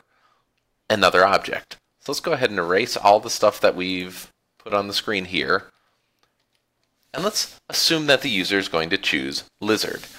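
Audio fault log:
Nothing stood out on listening.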